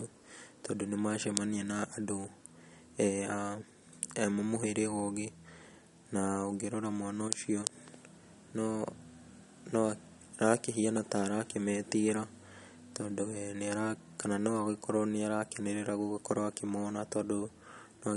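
Throughout the speech, nothing sounds above 11.2 kHz. Sibilants swirl and chirp, and the sound has a watery edge. This is likely MP3 compression at a starved bitrate, around 50 kbps. The encoder drops the treble and lets weak components flicker between frames.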